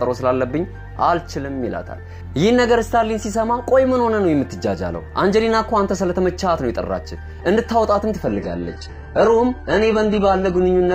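At 8.26 s the audio drops abruptly, with no gap, to an adaptive stream at a lower bitrate. It stays there to the end. A slowed connection forced a leaner version. Nothing sounds above 11 kHz, fitting very low-bitrate HE-AAC.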